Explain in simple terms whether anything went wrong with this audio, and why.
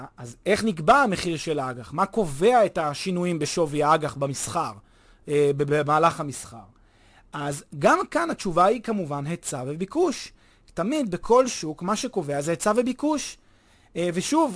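Yes, something went wrong. The speech has aliasing from start to finish. Hiss-like sounds such as s and sh come out gritty and metallic. The sample rate was lowered, which fits a drop to 22 kHz, without filtering first. Sound above 11 kHz folded back down as faint false tones.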